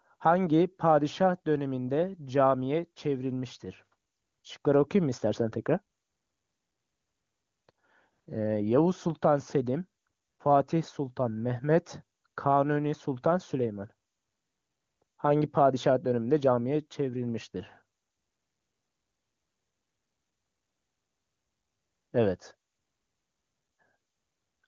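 Nothing here needs fixing: it's a speech recording carried over the AMR wideband (HD Voice) codec, which sounds like it's running at one of its higher rates, and there's nothing wrong to point to anywhere in it.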